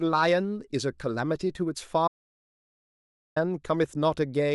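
At 2.08 s the speech cuts out and the track drops to dead digital silence, no room tone at all, until 3.36 s. That's an audio dropout to silence lasting about 1.29 s, likely a lost input, with silence written meanwhile, so whatever was said there is simply gone.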